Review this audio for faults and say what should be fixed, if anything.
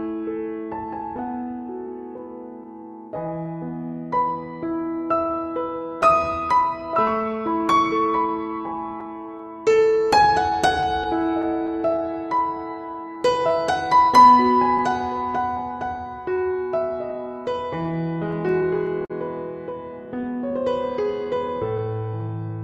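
Clock drift between sender and receiver runs through the whole clip. The sender's clock is about 5% slower, so the receiver's jitter buffer keeps draining and must be topped up.

Repeated timing corrections from 0.02 to 22.5 s stretch playback to about 96% speed. Small repeated pieces add up to roughly 0.7 s.

Scattered short gaps occur from 1.17 to 16.02 s, with around twenty tiny holes up to about 15 ms. More gaps follow from 17.84 to 19.12 s, about five of them and up to about 50 ms, and from 20.95 to 22.23 s, about three of up to about 10 ms. Each gap was patched by extending the preceding sound, leaving brief ticks and smears.

Locking the receiver to the sender's clock with adaptive resampling, and giving the jitter buffer enough depth to ride out late packets, would prevent these faults.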